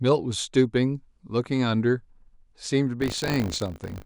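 From 3.0 s to the end, the speech shows buffer tearing: the software filling the ring buffer and the hardware draining it have drifted out of step, crossing inside every period. A small slice of each buffer, well under a tenth, replays audio from roughly 40 ms earlier, with abrupt joins on either side. The 50 Hz repetition fits a 20 ms buffer period, and it comes through as a robotic rattle riding on the speech.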